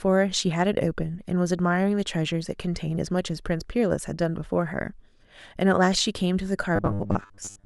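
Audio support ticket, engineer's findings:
Rigid metallic buzz at 100 Hz over speech, 6.76 s to 7.66 s (clip end). Robotic sound from repeated short buffers. Likely playback underrun: last 10 ms block looped to fill gaps, most incoming audio skipped.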